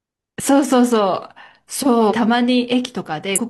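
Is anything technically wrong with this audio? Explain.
Yes. There are compressed frames skipped at 2.07 to 2.13 s and again at 3.35 to 3.40 s. Whole blocks of the encoded speech were never decoded, either lost from the file or discarded by the decoder as corrupt, so playback leaps forward: about 400 ms vanishes at the first point, which fits roughly ten 42.7 ms frames, and about 300 ms at the second.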